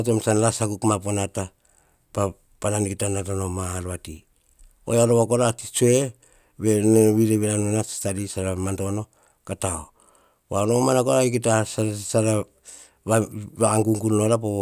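Speech, with no technical fault heard anywhere in the recording.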